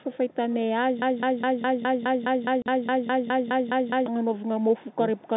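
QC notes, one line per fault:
0.03–0.36 s, echo leak: a far-end echo canceller likely let part of its loudspeaker pickup through and returned it. A faint copy of the speech, roughly 25 dB down, trails the original by 234 ms.
1.02–4.06 s, broken-record loop: the stream likely stalled and kept resending the last fragment it held. A 207 ms slice of speech repeats back to back about 15 times, producing a stuttering, mechanical cycle, and the speech that belonged in those three seconds is gone.
2.62–2.66 s, packet loss filled with silence: audio data went missing and the receiver played silence in its place. This leaves a 40 ms hole, consistent with two 20 ms packets. Its hard edges chop the sound abruptly.
4.25–5.36 s, speech suppressed in double talk: with both sides talking, the echo canceller likely treated this talker as echo and turned it down. Over about a second, the speech dips and drops out in pieces, by as much as roughly 40 dB, within the narrow telephone band.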